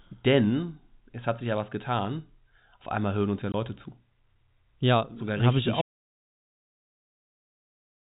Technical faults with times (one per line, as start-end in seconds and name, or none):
3.52-3.54 packet loss filled with silence
5.81-8.06 audio dropout to silence